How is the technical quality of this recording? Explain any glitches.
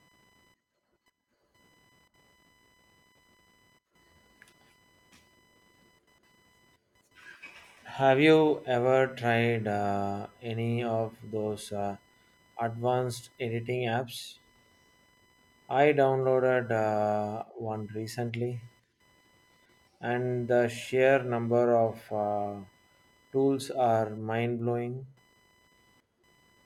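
The recording has one persistent technical fault, present from start to finish. Computer activity noise runs under the speech throughout: a faint buzzing chirp pulsing at around 1 kHz, roughly 40 dB below the speech. Processor, graphics or mouse load shifts the shared ground the audio circuit references, so the noise follows machine activity, not the speech.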